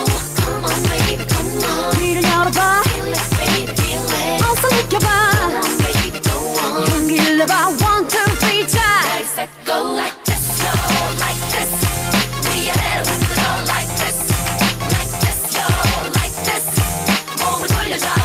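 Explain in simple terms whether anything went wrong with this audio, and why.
Nothing went wrong; no faults can be heard.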